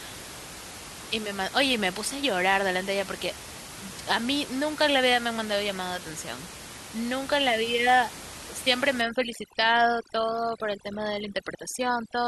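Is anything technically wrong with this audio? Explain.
Yes. From 9.01 s to the end of the clip there is overdone noise removal. A noise reducer set too strong is pulling individual frequency bands far down or off wherever they sit close to its noise estimate, taking the quieter parts of the speech with them. The background collapses to near silence sprinkled with twinkling specks. Before 9.01 s, the steady room noise sits about 14 dB below the speech, and that sudden swap for flickering emptiness is what distinguishes this from a low-bitrate codec, which would smear the whole clip evenly rather than gating the gaps.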